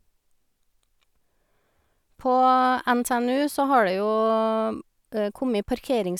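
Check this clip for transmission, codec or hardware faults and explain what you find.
No faults detected.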